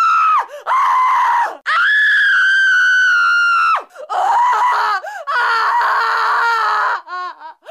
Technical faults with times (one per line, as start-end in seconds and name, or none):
none